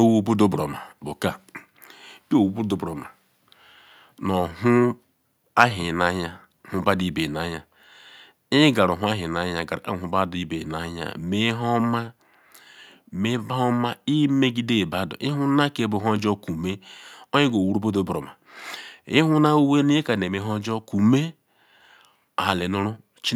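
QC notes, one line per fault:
5.59–5.64 s, microphone overload: for about 50 ms the loudest peak of the speech flattens against the converter's limit, overshooting by about 4 dB, with only a small share of the samples, roughly 2 percent, sheared off. The cut-off tops turn smooth waveform crests into square edges, which adds a brief harsh, crackly grit on that syllable. The likely cause is input gain set too hot for the converter, so this louder moment ran out of headroom.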